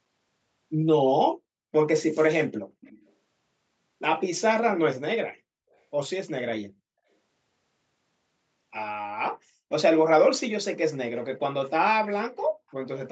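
From 2.81 to 3.11 s, and again from 5.73 to 5.78 s, an echo leak brings back a faint, delayed copy of the speech about 354 ms late, likely from an echo canceller missing loudspeaker pickup.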